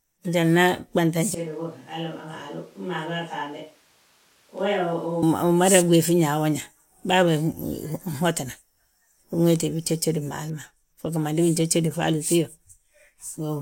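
From 1.35 s to 5.22 s the recording most likely switches to a distant microphone, with the close microphone's signal dropping out and a far-off pickup such as a camera's taking over. The speech turns abruptly roomy and hollow, loses bass and falls roughly 10 dB in level, while room noise rises to around 30 dB below the speech. At 5.22 s the close, fuller sound snaps back just as suddenly.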